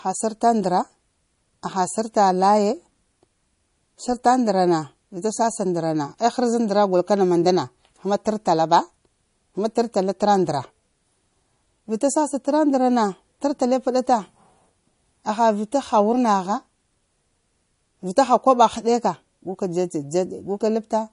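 Right through the speech there's plainly audible codec damage: nothing above 10.6 kHz, and a watery, swirly texture as weak detail flickers between frames. That's likely MP3 compression from a starved encoder, and the damage fits a bitrate around 40 kbps.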